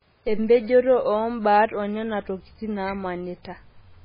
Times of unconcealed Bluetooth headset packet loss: none

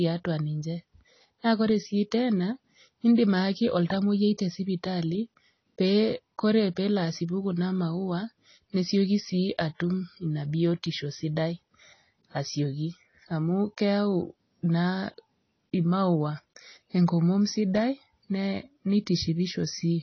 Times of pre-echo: 3.15-3.18

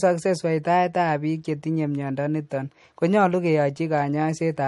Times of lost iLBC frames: none

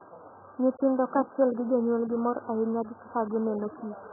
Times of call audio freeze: none

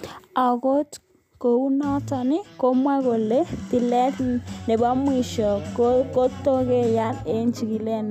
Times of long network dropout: none

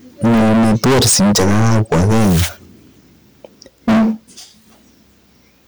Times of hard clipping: 0.24-2.46, 3.88-4.10

